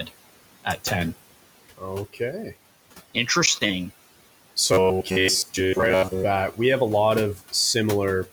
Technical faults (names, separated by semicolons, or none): noise suppressor artifacts; speech cut by the noise suppressor; robotic sound from repeated short buffers